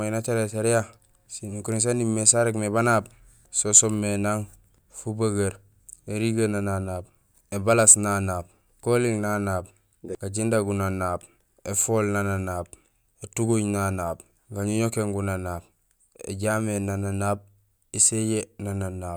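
No technical faults are audible anywhere in this recording.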